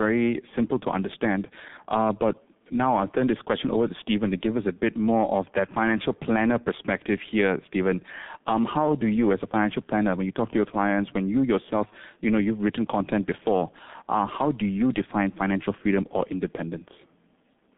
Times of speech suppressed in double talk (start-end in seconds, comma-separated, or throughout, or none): none